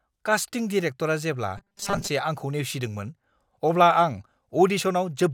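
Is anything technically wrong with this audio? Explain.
Yes. Robotic sound from repeated short buffers runs from 1.58 to 2.09 s, ending just before "आंखौ नेवसिदोंमोन". The likely cause is audio arriving too seldom, so playback fills each gap by looping a very short slice while the real signal is dropped. The loop repeats every 5 ms, imposing a fixed 200 Hz buzz. Across most of this stretch the speech becomes a stiff, metallic buzz that only loosely tracks the words.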